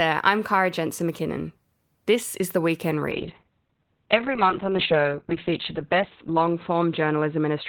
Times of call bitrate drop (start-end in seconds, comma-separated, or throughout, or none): 3.12-7.68